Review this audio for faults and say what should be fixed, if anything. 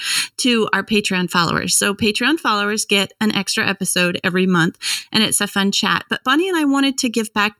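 Throughout the speech the sound is hollow and phasey, with fixed dips starting around 700 Hz and repeating at even spacing up the spectrum. This is channel delay (comb filtering). One channel runs just under a millisecond late, and summing to mono cancels the shared content at those frequencies. Time-align the two channels before any mono fold-down.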